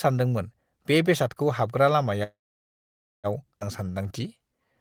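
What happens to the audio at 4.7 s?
At 4.7 s the clip is at the tail of a jitter buffer slow-down running from 3.83 to 4.74 s. The receiver repeats pitch periods to add about 125 ms, so the speech plays at 87% speed, drawn out, yet the pitch stays unchanged, unlike a slowed playback.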